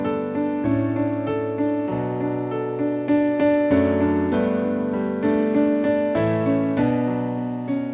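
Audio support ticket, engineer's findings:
No faults found; content stops at 4 kHz, consistent with a narrowband call codec such as G.711 mu-law on the WebRTC call path, as expected for that link.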